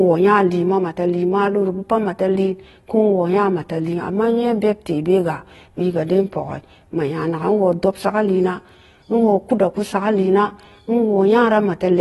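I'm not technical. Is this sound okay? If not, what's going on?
No. From start to finish the speech sounds dull and swirly, with a fizzy, warbling edge on hissy sounds like s and sh. That is AAC compression damage, likely from saving or sending the audio in a heavily squeezed AAC format. Nothing above about 11.8 kHz survives, which takes away the crisp top. Unlike simple muffling, which only dulls the sound, this also adds that watery, bubbling texture.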